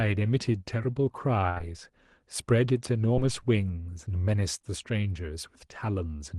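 At 1.49 s a burst of packet loss begins and runs to 1.58 s. Several packets in a row failed to arrive in time. The receiver stretched the last sound for about 67 ms and let it fade. It comes across as a held buzz or hiss sinking in level. About 60 ms of the real speech is missing when the audio resumes.

A short concealed packet loss follows straight after, from 1.58 to 1.61 s. Another comes at 3.15 to 3.19 s. Each drops about 20 ms. The decoder bridges the hole with a synthetic continuation of 11 to 16 ms, then blends back. Each is heard as a quick smear or wobble. From 4.59 to 4.71 s the timing is stretched by roughly ten milliseconds. A further 20 ms loss at 4.62 to 4.65 s sits inside that stretch and adds a brief wobble. The Opus call path limits the top end to about 12 kHz.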